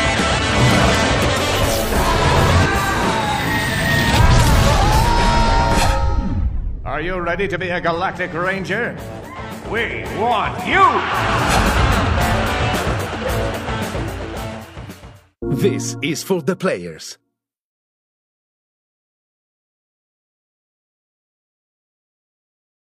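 No technical faults are audible anywhere in the audio.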